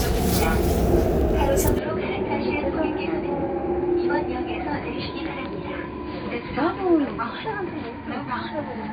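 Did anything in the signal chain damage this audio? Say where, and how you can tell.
Yes. At 1.79 s the sounds turn dull and boxy with no gap, and stay so to the end. Nothing passes above 4.7 kHz. Level drops about 5 dB, and a new hiss sits roughly 30 dB down. This is likely an input switched to a poorer device.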